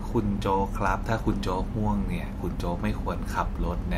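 No technical faults are audible.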